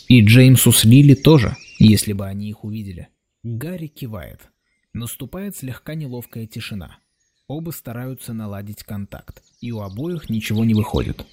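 Zipper noise sits on the audio at 1.84 to 2.28 s, a fall of about 20 dB in 2 dB steps, and at 9.92 to 11.24 s, a rise of about 20 dB in 1 dB steps. Each ungraded step clicks, giving a ticking at roughly 30 per second.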